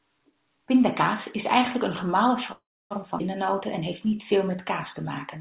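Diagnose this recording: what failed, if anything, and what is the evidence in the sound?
At 2.52 s the sound stops and is filled until 2.94 s: a brief continuation of the last sound, then about 0.29 s of silence, with nothing lost afterwards. This is a call audio freeze, likely packets held up in the network, with the jitter buffer running empty and adding 385 ms of delay.

A skip ahead occurs between 3.19 and 3.23 s. Playback jumps forward across a join of about 12 ms, and roughly 150 ms of audio is gone. A stretch of audio was dropped, either in transit or by the jitter buffer, leaving the two sides almost directly spliced.

From 4.05 to 4.57 s the jitter buffer slows down. Sound is drawn out at unchanged pitch, running at about 91% speed with 54 ms added. The buffer was repeating pitch periods to rebuild its reserve, heard through the narrowband call path, which carries nothing above 4 kHz.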